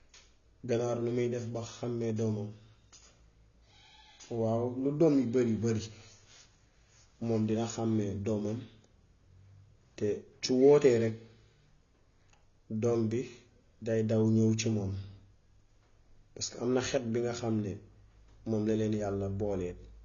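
From start to finish the speech carries plainly audible coding damage, and nothing is present above about 6.9 kHz. The band limit takes the air and crispness off consonants and leaves the sound dull. The hard ceiling and coarse texture point to AAC compression, likely AAC-LC at a low bitrate around 24 kbps, where the encoder drops the top of the spectrum and quantises the remaining frequency lines too coarsely to keep detail.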